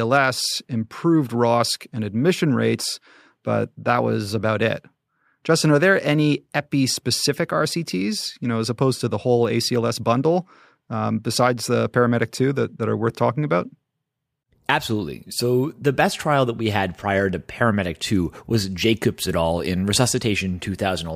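A recording of speech, and there's nothing technically wrong to point to here: no faults turn up anywhere in it.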